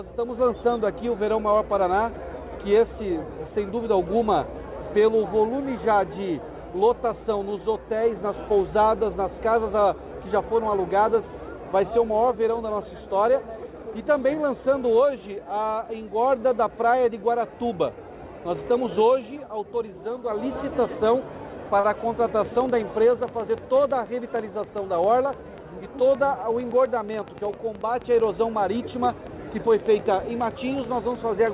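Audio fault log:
21.80 to 21.86 s, short stall from a late packet: a packet arrived late and the jitter buffer ran dry, so the receiver stretched the preceding sound by about 35 ms and resumed where it left off. Nothing is lost, but the held sound drags briefly.
22.45 to 31.54 s, train of clicks: irregularly spaced clicks at roughly 7.3 per second tick over the sound to the end, including pauses, peaking about 5 dB above the signal. Likely interference from nearby equipment or a faulty connection or power supply.
23.87 to 24.22 s, jitter buffer speed-up: the buffer held more audio than its target, so the receiver trimmed short pitch-period pieces, around 40 ms in total. Playback runs about 9% faster at unchanged pitch, sounding hurried, through the G.711 mu-law call path with nothing above 4 kHz.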